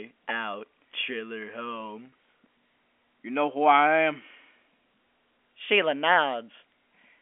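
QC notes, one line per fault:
2.10 to 2.12 s, packet loss with pitch repetition: right after "out chiller" the sound briefly holds on one slightly buzzy pitch instead of moving on, then carries on normally. For about 20 ms, which fits a single lost packet, nothing arrived, so the receiver filled the gap by repeating the last pitch period it had. The loss is short enough that the speech resumes rather than fading into silence, heard over the narrow 250 to 3400 Hz telephone band of G.711 coding.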